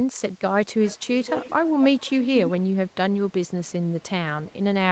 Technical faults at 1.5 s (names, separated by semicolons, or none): echo leak